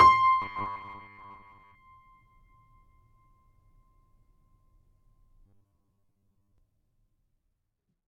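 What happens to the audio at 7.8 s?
Nothing goes wrong at 7.8 s; the music plays through that moment intact.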